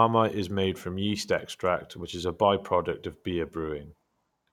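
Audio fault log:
Nothing to log here: the speech comes through with no technical faults to report.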